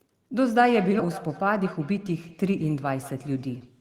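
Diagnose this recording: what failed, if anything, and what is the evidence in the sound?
A feedback echo between two devices runs from 0.49 to 3.76 s. The speech returns about every fifth of a second, at about 15 dB below the direct sound, thinner on each pass. This is an acoustic loop at the call-processing stage. One device plays the other's microphone signal back into the same room, and neither echo canceller removes it.

A skip ahead occurs at about 1.0 s. Playback jumps forward with no gap, and roughly 0.4 s of speech is missing. Both sides of the cut join directly. This points to the network or jitter buffer, which discarded late audio while newer audio was already queued.

Jitter buffer speed-up runs from 1.58 to 2.12 s. The speech plays about 6% faster at unchanged pitch and sounds slightly hurried. The receiver's buffer trimmed short pitch-period pieces, a few tens of milliseconds in total, to shrink an oversized delay.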